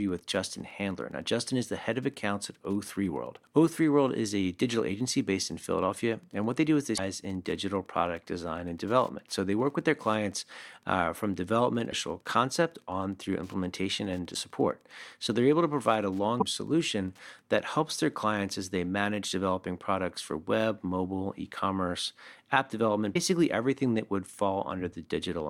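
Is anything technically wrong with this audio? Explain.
Yes, there are two faults: Wi-Fi interference, and damaged data in a compressed stream.

Wi-Fi interference runs from the start to 17.44 s, stopping just before "that helps their clients". A nearby Wi-Fi radio's beacon, every 102.4 ms, is picked up and rectified by the audio circuit, giving a faint, regular ticking about ten times a second, far below the speech. Mains hum would be a continuous tone, and a mechanical clock would tick about once a second, not ten times.

Damaged data in a compressed stream produces short chirps or squawks, each about 56 ms long, at 6.94 s, 11.87 s, 14.30 s, 16.37 s and 23.11 s. The last comes just after "mobile e commerce app". At each point, corrupted bytes in the compressed stream make the decoder misread frames and lose sync until it finds the next valid frame header.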